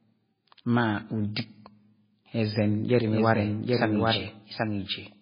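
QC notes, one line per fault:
throughout, MP3 compression: the speech sounds watery and swirly, with a metallic chirp on s sounds and consonant attacks smeared, which is what you get when weak frequency lines drop in and out from frame to frame as the encoder runs short of bits. Nothing comes through above about 5 kHz, so the top end is gone entirely. The damage is heavy, and it likely comes from MP3 coding at a very low rate, in the region of 16 kbps.
3.12 s to end, doubled audio track: from here a second full-band copy of the speech runs underneath the original, trailing it by roughly 0.7 s and sitting around 5 dB down. It cuts in abruptly rather than building up, and it has no decay or room colour, so it isn't an echo. It just sounds like the same audio laid in twice, out of step. The likely cause is a second, slower capture path or an edit that left two copies overlapping, and it carries on to the end.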